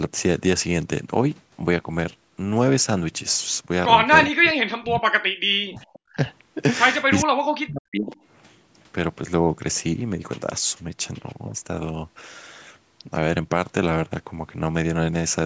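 From 4.3 to 6.18 s the speech sinks sharply, dropping by roughly 40 dB at its deepest and breaking up over about two seconds. It dips the same way again from 7.23 to 8.16 s. Each dip is likely speech suppressed in double talk: with both sides talking, the echo canceller mistook the talker for loudspeaker echo and attenuated it. The band still tops out at 8 kHz through both dips.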